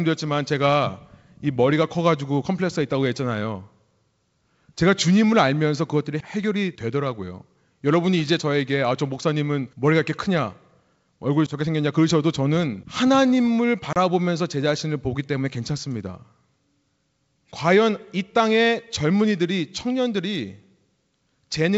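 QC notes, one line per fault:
13.93–13.97 s, packet loss on an ADPCM call: a few packets (about 30 ms) were lost and replaced by silence, leaving the decoder's predictor and step size out of step with the sender's, so the hard-edged hole ends in brief distortion.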